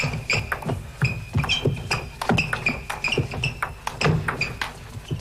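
A dropped buffer (overrun) is the likely cause of the four abrupt skips at 0.40, 1.65, 3.04 and 4.57 s. At each one the audio jumps forward with no gap of silence, as though a short stretch had been cut out and the two sides spliced together. The missing stretch sounds like roughly 50 ms at the first skip, a brief 20 ms or so at the second and third, and about 70 ms at the last, the longest jump.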